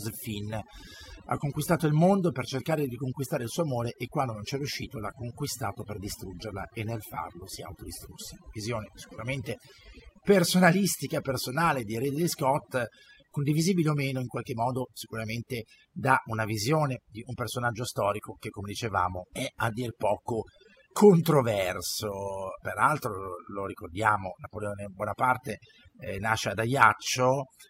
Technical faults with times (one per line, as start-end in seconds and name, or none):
0.00-27.70 overdone noise removal